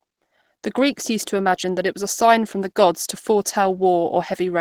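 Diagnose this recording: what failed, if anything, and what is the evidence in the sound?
The codec stage is the likely failure: Opus compression, running through the whole clip. The speech is hoarse, grainy and muffled, yet the band stays wide, with content reaching to 20.4 kHz. That points to Opus's hybrid mode at a low rate, around 16 kbps. The encoder codes the lower band as speech and fills upper bands with folded or noise-like energy. Unlike MP3 damage, there are few swirling spectral holes, just roughened texture.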